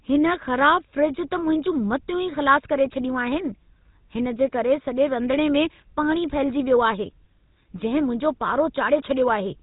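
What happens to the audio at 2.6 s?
At 2.6 s the speech carries GSM full-rate codec damage, present throughout the clip. The codec models the vocal tract and drives it with sparse regular pulses, which fits a 13 kbps bitrate, so the voice sounds buzzy and gravelly with nothing above 3.8 kHz. Simple band-limiting would muffle the voice without that rough buzz.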